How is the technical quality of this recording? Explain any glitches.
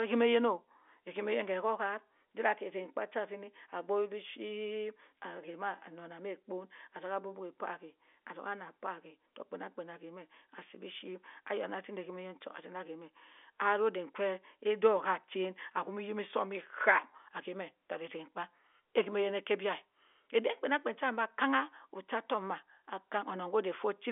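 No glitches or faults can be heard anywhere in the recording. The speech comes through G.711 telephone coding, so it has the narrow sound of a phone line, with the band running from about 300 Hz to 3.5 kHz and nothing audible above roughly 3.7 kHz.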